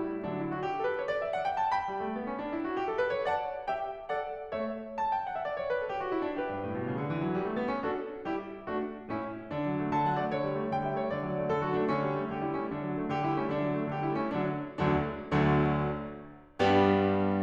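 A music clip with clock slip clicks from 0.12 s to 17.42 s: faint ticks about every tenth of a second, around 150 in all, clearest on loud passages. The likely cause is two unsynchronised clocks differing by roughly 200 ppm, dropping or repeating one sample per slip.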